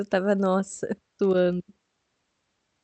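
No technical faults can be heard in this speech.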